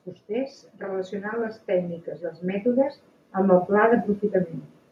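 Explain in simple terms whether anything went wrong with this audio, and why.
Yes, there's automatic gain rising: from 0.26 to 4.16 s the recording slowly turns itself up, and the background swells along with the speech, unlike a speaker simply moving closer.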